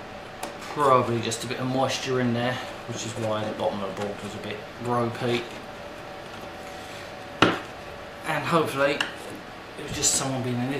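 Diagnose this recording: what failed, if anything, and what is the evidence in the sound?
Nothing failed; there is no evidence in the sound of any fault at any stage.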